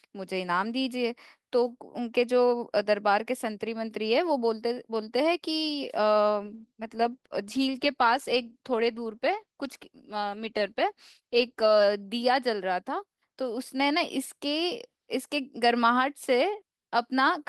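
At 6.42 s a call bitrate drop starts. The encoder falls from 32 to 14 kbps, so speech turns coarse and muffled until 11.91 s.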